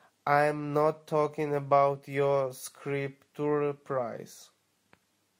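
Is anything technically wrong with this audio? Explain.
No, nothing technically wrong can be heard here.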